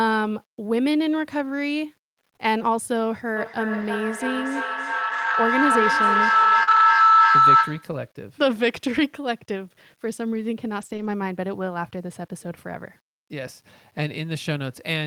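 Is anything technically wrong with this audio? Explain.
Yes, there are four kinds of fault in this speech clip.

Low bit depth without dither, throughout: the audio sounds as if rounded to about 9 bits with no dither, so the rounding error tracks the signal. Quiet passages turn grainy, with a gritty noise floor roughly 40 dB below the speech. That is the likely cause.

Feedback howl, 3.36 to 8.07 s: another device in the room is picking up the call, and the loop from loudspeaker to microphone gains level on each pass. Repeats narrow to a tone around 1.5 kHz that pulses roughly every third of a second and peaks about 7 dB above the speech.

Lost packet rebuilt from error correction, at 3.81 to 3.83, 5.09 to 5.35, 6.67 to 6.81 and 10.81 to 11.07 s: the decoder played low-bitrate copies carried in the following packets in place of lost ones. Nothing drops out, but those stretches sound rougher and noisier.

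Short concealed packet loss, 6.63 to 6.69 s: about 40 ms never arrived in time, and the receiver extended the preceding sound to cover the gap before blending back into the real audio. This gives a brief smear, overlapping the rebuilt stretch that follows.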